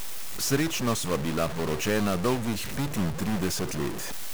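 Harsh, buzzy distortion runs through the whole speech clip, and even the pauses carry a steady gritty noise. This is likely a stuck bit: one data bit held fixed, offsetting about half the samples by a step near -30 dBFS.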